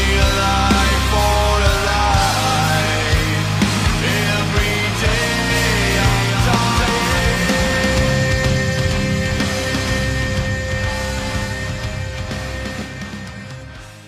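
From about 5.5 s to 12.82 s there's a doubled audio track: a full-band copy trails roughly 300 ms behind, about 5 dB quieter, dry with no decay, switching on and off abruptly. Likely a second, slower capture path mixed in alongside the original.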